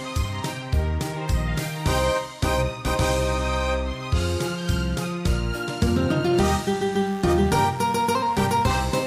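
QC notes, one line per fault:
6.34 to 9.07 s, mains buzz: a steady, raspy buzz enters at 6.34 s and continues to the end, sitting roughly 25 dB below the sound. Its edge comes from sharp switching spikes arriving twice per cycle of the 50 Hz supply, so the energy lands on harmonics of 50 Hz stretching into the kilohertz range. Electrical interference leaking into the signal path, from a dimmer, a rectifier or an unshielded cable, produces this kind of buzz.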